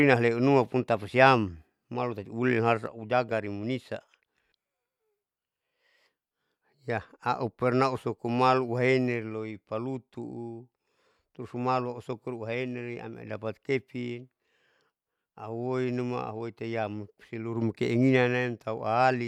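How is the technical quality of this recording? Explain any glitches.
The recording has one clear technical fault: a sudden gain jump at 2.86 s, after which the level stays about 4 dB lower until the end. The speech and the background noise drop together in a single step, with no fade, which points to a digital gain change applied between one sample and the next, likely a setting change or bit shift made without a ramp. On a waveform the envelope steps down abruptly at that point. On a spectrogram every frequency band darkens at once, so a vertical boundary appears across the whole image.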